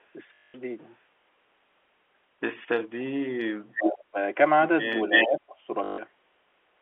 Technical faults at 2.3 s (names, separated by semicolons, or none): none